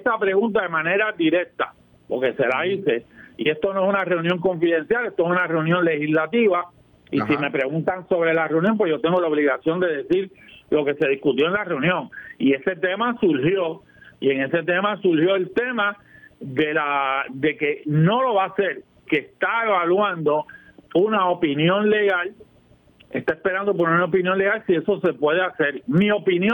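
Gain pumping runs through the whole recording: the level ducks under each loud sound, with a swing of around 10 dB. The likely cause is input gain set far too high, with a fast limiter clamping each peak. On a waveform the envelope looks flattened, with the noise floor rising between bursts; a spectrogram shows the background band brightening in the pauses.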